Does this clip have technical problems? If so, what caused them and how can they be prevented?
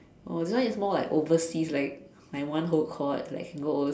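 No, this clip has no technical problems, so there is nothing to trace to a cause or prevent.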